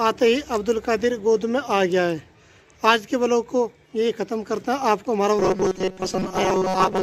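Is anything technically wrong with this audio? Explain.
Yes. From 5.39 s to 7.02 s, robotic sound from repeated short buffers: new audio likely arrives too seldom, so a 5.3 ms slice repeats in place of most of the real audio, forcing a rigid, metallic 188 Hz buzz.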